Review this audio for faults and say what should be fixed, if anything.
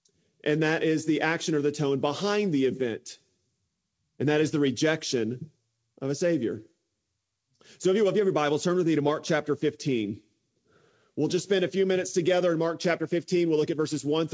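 No faults turn up in this audio, so nothing needs to be fixed; its content stops at about 8 kHz, as expected from the G.722 call path it went through.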